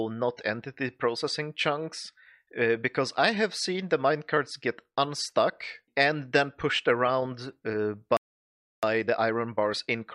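The audio runs cleanly up to 8.17 s and then just drops out. There's a playback stall lasting about 0.66 s, through to 8.83 s, where the output goes completely silent mid-flow. That pattern is most likely the player running dry of buffered data or having its output thread held up, so nothing reaches the speakers until it recovers. Once it picks back up at 8.83 s, you get time-compressed catch-up all the way to the end. The player is clawing back that lost backlog by snipping out tiny slices and cross-fading across the joins, so the sound moves about 1.1 times faster while keeping its normal pitch. It's a mild speed-up, but you can hear the rush in that last stretch.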